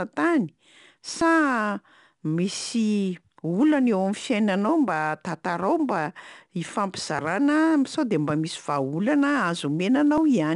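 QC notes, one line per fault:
throughout: 4-bit ADPCM compression. Each sample is coded as a coarse 4-bit step from a predicted value, so quantisation error rides along as gritty broadband hiss that swells with the speech and drops in pauses, with roughness on sharp onsets. Nothing reaches above 10.6 kHz, which fits a sample rate near 22 kHz. On a spectrogram a noise haze fills the gaps between harmonics during loud passages, and everything above 10.6 kHz is empty.
1.21, 10.18: audio missing between chunks. At each point roughly 10 ms of sound disappears and the two sides butt together with no silence, heard as a small skip or tick. The likely cause is a recorder dropping a sliver of audio at a chunk boundary, given chunks of 3 s. On the waveform a sudden step or discontinuity shows where the wave jumps phase. On a spectrogram a thin vertical broadband line marks each splice.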